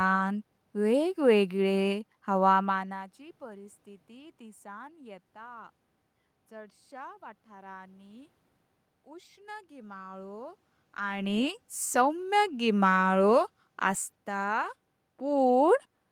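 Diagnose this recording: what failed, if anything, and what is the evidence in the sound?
Nothing failed; no stage in the chain shows any fault.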